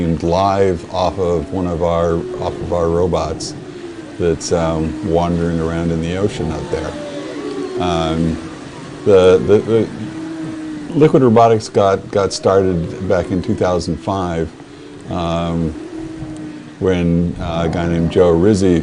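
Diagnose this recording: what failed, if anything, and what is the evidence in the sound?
Nothing in the signal chain shows a failure: across the whole recording there are no dropouts, clicks, clipping, hum, level jumps or timing disturbances that would point to a problem at any stage between capture and playback.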